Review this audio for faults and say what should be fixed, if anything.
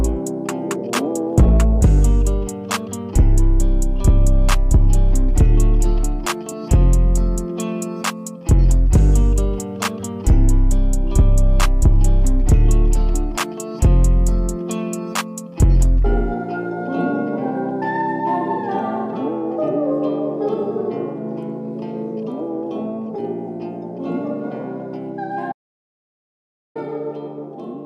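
Audio dropout to silence from 25.52 to 26.75 s. The sound cuts to silence for 1.23 s, with no room tone. The likely cause is a lost input link. Secure every cable and connection, and monitor the input live while capturing.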